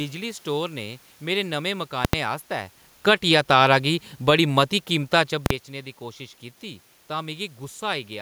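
From 2.94 to 3.36 s the speech and its room noise sink together by about 3 dB, a smooth dip that marks automatic gain falling: the gain control judged the input too loud or its background noise too strong and backed its gain off gradually, unlike the natural level shift around 2.5 s when the talker moves.

At 5.46 to 5.50 s a single violent bang cuts through, the output pinned at one extreme value for about 43 ms. These are invalid numbers at full scale: a calculation produced infinite or invalid values that clipped to the maximum for one block, which fits a 2048-sample block.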